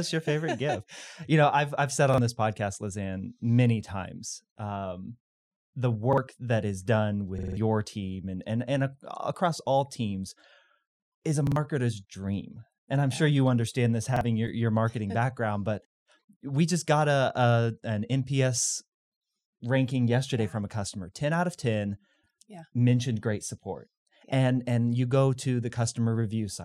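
Audio arrived late, so the device replayed its last 46 ms buffer, which fits a 2048-sample buffer. Each repeated buffer adds a hard-joined stutter: once at 2.14 s after "I've said", once at 6.13 s after "many times um the", four times from 7.38 to 7.57 s before "team and and and", twice at 11.47 s, and once at 14.16 s.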